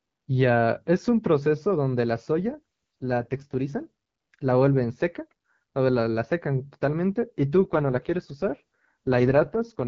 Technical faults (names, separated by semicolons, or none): AMR rate drop